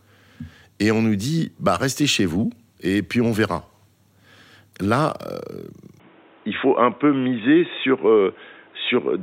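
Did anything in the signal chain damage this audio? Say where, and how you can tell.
Yes. At the input stage the speech is likely switched to a poorer device from 6.00 s to the end. Everything above 3.8 kHz vanishes at once, with no gap or level jump, and a new noise floor about 35 dB down arrives. That new noise, unlike a codec's bandwidth cut, marks different hardware.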